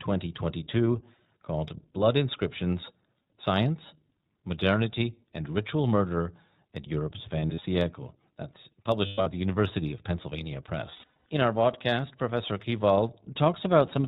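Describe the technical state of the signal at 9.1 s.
At 9.1 s the signal sits inside a burst of lost iLBC frames running from 9.06 to 9.27 s. About 160 ms of audio is missing, scattered over roughly 200 ms, which fits eight 20 ms frames. The longest unbroken gap is around a tenth of a second. The decoder conceals each gap by repeating the last pitch cycle blended with noise, so the holes come out as a held, faintly buzzy, breathy vowel. Because each iLBC frame decodes on its own, speech snaps back almost immediately once packets arrive again.

Underneath this, the iLBC codec is audible across the whole clip. It runs at 15.2 kbps with 20 ms frames, and the bandwidth stops at 4 kHz, leaving the speech dull and telephone-like. The coding is plainly audible as a rough, slightly synthetic texture on the speech.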